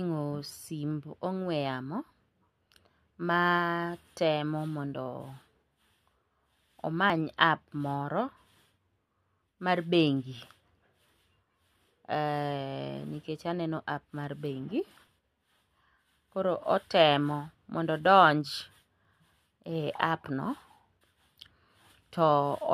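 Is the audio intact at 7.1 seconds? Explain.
No. An overlap between stream segments at 7.10 s: two segments' timestamps overlapped, so a few milliseconds were trimmed, making the waveform jump into a tiny skip.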